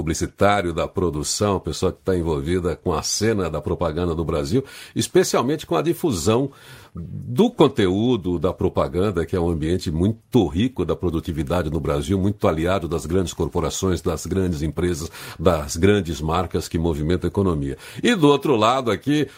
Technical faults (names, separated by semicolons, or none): none